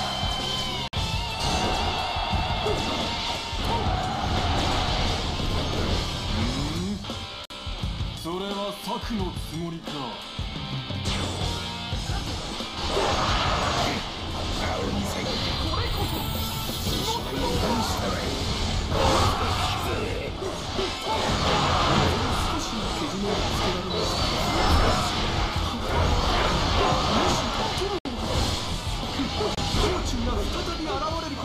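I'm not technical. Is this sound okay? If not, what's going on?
No. There are three short holes of silence: at 0.88 s (about 52 ms), at 7.45 s (about 49 ms) and at 27.99 s (about 66 ms). Each is a gap at a join of encoded pieces. The audio was saved in separate chunks and stitched together, and each chunk kept a sliver of silence at its edge. Unlike a dropout, nothing is lost: the sound briefly stops, then carries on exactly where it left off.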